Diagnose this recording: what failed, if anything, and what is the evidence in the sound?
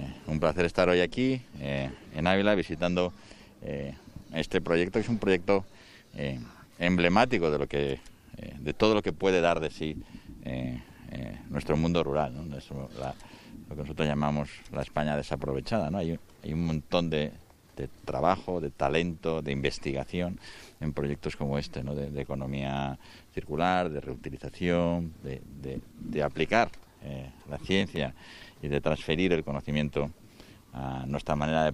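A processor overload crackle at the driver or buffer stage runs from 27.64 to 27.98 s: a gritty, tearing burst lasting about a third of a second that sits on top of the sound and then stops cleanly. The processing fell behind on around ten very short buffers, each under a millisecond, and each missed block was skipped rather than repeated, leaving tiny hard-edged gaps. On a waveform these show as small notches with abrupt edges; a spectrogram shows thin vertical broadband streaks clustered in that interval.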